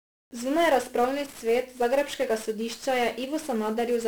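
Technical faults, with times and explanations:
Throughout, 1-bit DFPWM compression: the speech sounds fuzzy and crackly, with the treble lost in hiss, because one bit per sample only nudges an adaptive level, leaving heavy broadband noise.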